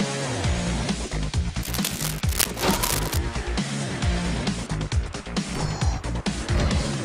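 From 1.63 to 3.18 s, dense, uneven bursts of scratching and rustling sit over the sound, around 5 dB below it. This is cable scratch noise, likely from a worn cable, connector or control carrying DC being moved, so its contact resistance jumps rapidly.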